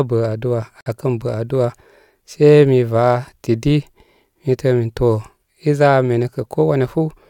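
At 0.81 s, after "bə aduwa", a gap at a join of encoded pieces inserts 53 ms of untrimmed encoder padding, a flat waveform stretch and blank spectrogram band with smeared edges.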